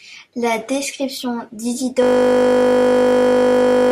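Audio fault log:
2.03 s to end, system hang loop: the speech gives way to a steady buzz at 50 Hz that runs until the clip ends. Here the computer or its audio driver stalled while the output hardware kept replaying the same block of its ring buffer. One 20 ms slice of audio repeats nearly a hundred times. A piece that short cycles too fast to register as stuttering, so it fuses into a fixed tone at the loop rate.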